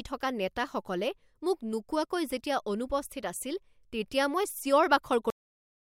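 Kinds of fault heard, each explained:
Cut-off end: the speech stops dead at 5.30 s, mid-sound, with no natural tail or decay. What you're hearing is the last stretch of audio simply never making it out. The final buffers weren't written or played, so the signal drops straight to digital silence. That silence then runs for about the last 0.64 s of the clip, which makes the ending feel chopped rather than finished.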